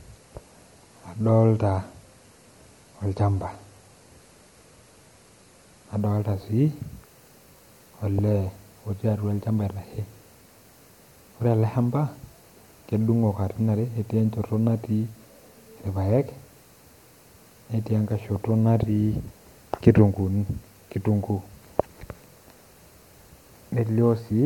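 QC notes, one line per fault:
0.0–6.0 s, adaptive stream starting at a low bitrate: dull, swirly speech with nothing above 11.8 kHz, then a sudden gapless lift in clarity at 6.0 s. This fits the player opening on a low-bitrate MP3 rendition near 48 kbit/s before switching to about 128 kbit/s.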